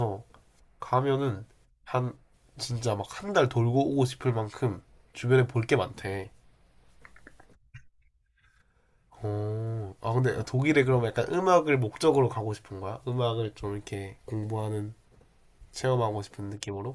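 No technical faults can be heard in the speech, so there is nothing to describe in time order.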